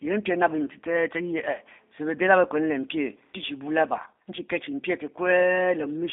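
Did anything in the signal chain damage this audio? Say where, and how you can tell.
Yes, at the codec: throughout, the speech is held to 250 Hz–3.6 kHz and sounds plainly rough and synthetic, fitting G.729's model-based rebuild at 8 kbit/s.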